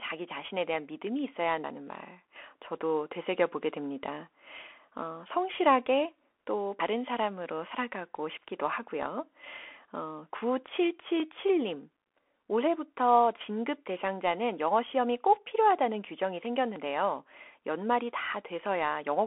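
Speech passed through a Bluetooth CVSD headset codec: nothing gets through above 3.8 kHz, and a granular hiss and scratchy s sounds set it apart from simple, clean band-limiting. Abrupt skips forward with no silent gap, at 1.64, 2.36, 6.8, 7.72, 11.2 and 16.76 s, are likely dropped buffers (overrun). The one at 1.64 s loses about a tenth of a second.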